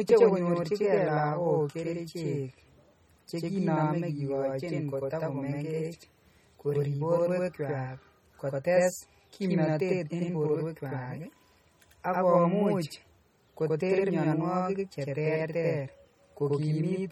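From the start and through the whole speech clip, a channel delay (doubling) is audible: one channel arrives about 92.9 ms late, which fits a 4096-sample buffer, and summing to mono leaves a second copy at equal level. Unlike room reverb, it is one discrete slap with no decaying tail.

Also throughout, the sound is plainly watery and swirly, with chirpy sibilants, smeared onsets and nothing above 18 kHz. This is likely MP3 compression at a low bitrate such as 32 kbps, with weak frequency lines zeroed and flickering between frames. Unlike a plain low-pass filter, it adds this unstable texture.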